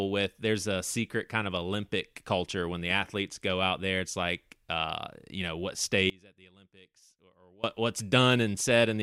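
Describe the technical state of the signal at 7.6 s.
At 7.6 s the speech is still inside an audio dropout to a faint residue. It runs from 6.10 s to 7.64 s, about 1.54 s, and the signal returns only a few hundredths of a second later. The level falls abruptly rather than fading. What remains is a faint sound, roughly 25 dB below normal. The likely cause is a loss of the wanted signal while the path after the break stayed live.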